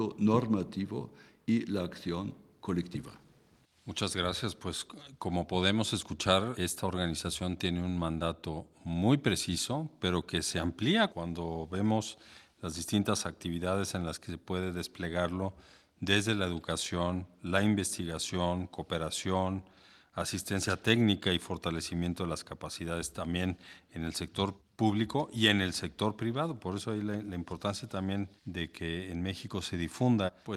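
Listening closely to the speech recording, nothing stood out as a technical fault at any point.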